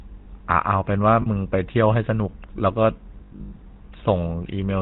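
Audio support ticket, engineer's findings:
GSM full-rate codec, throughout. Buzzy, gravelly roughness on all speech, plainly audible; nothing above 4 kHz. Vocal-tract model driven by sparse regular pulses, excitation thinned to every third sample, which fits a 13 kbps full-rate stream.

Lost GSM frames, 1.22–1.28 s. Brief rough, metallic ring for about 40 ms, consistent with two dropped frames. Decoder concealment held the last good frame's parameters and repeated them. Gap too short to fade to silence.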